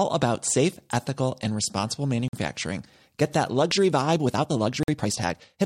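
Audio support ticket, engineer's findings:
Gap between chunks at 2.28 s: 50 ms hole in the speech. Codec padding or player at the chunk boundary inserting dead air between roughly 2.5 s blocks; nothing dropped, just delayed.

Gap between chunks at 4.83 s: identical 50 ms hole, 2.5 s after the first. Same chunk join, same mechanism. Regular spacing points to codec padding or late chunk start in playback, not network loss.

Time-stretched section, 3.49 s to end: speech suddenly rushed at about 1.35x pace, pitch unchanged. Likely a time-stretch stage squeezing the tail to fit a length, dropping short slices to keep pitch.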